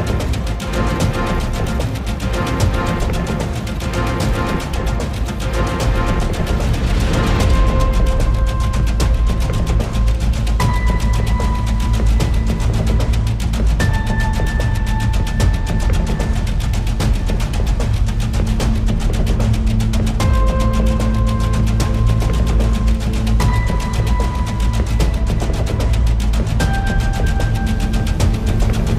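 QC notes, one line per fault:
No faults found. Nothing in the audio calls for a QC note.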